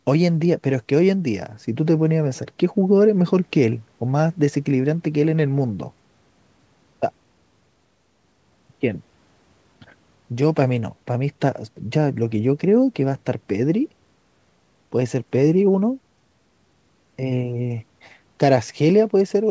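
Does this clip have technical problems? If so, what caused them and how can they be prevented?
No, this clip has no technical problems, so there is nothing to prevent.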